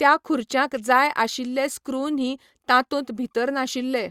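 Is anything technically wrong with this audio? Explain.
No, nothing in the signal points to a technical fault.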